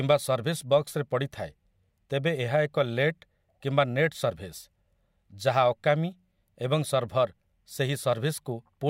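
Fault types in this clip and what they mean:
Nothing stood out on listening to this speech recording.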